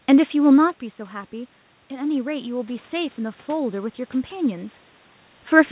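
Automatic gain rising, 1.31 to 3.80 s: after the input dropped about 10 dB, gain crept up about 4 dB. Speech and room noise swell together.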